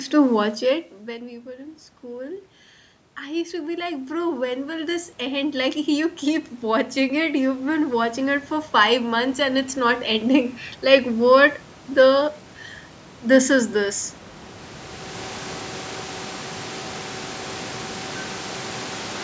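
From 1.05 to 2.54 s, and again from 3.24 to 11.23 s, the speech dropped about 20 dB at the input and automatic gain rising followed: the control raised its gain slowly, about 6 dB the first time and about 15 dB the second, so speech and room noise swell together. On a waveform the envelope climbs steadily across each span. A spectrogram shows the whole band, including the noise floor, brightening gradually.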